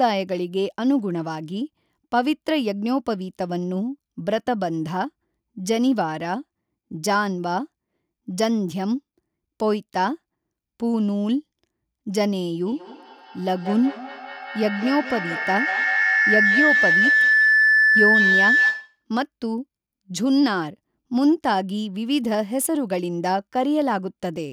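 A microphone-loudspeaker loop gaining level each trip causes feedback howl from 12.66 to 19.04 s: a tone near 2 kHz, pulsing, peaking about 3 dB above the speech.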